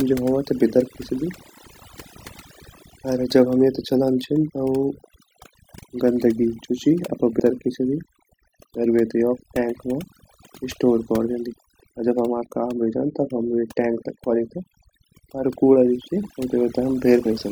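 A noise reduction stage was set far too aggressively, producing overdone noise removal throughout: bands near its noise estimate are pulled down or shut off along with quieter parts of the speech, leaving near-silent gaps full of twinkling specks.

Compressed frames skipped occurs four times. The decoder never plays a run of frames, which are lost or rejected as damaged, so the audio jumps forward. At 2.91 s, about 200 ms vanishes just before "अर जब हम येते". About 150 ms goes at 4.48 to 4.50 s, and roughly 70 ms goes at both 7.38 s and 17.25 s.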